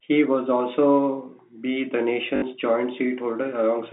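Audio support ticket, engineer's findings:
Robotic stutter, 2.36–2.42 s, right after "was also be the". Packet loss with last packet repeated: about 60 ms lost, fits three 20 ms packets, so the jitter buffer replays the last packet. Waveform: identical repeated blocks, steps at joins. Spectrogram: 50 Hz buzz. The G.711 A-law line's 200–3600 Hz band is audible throughout.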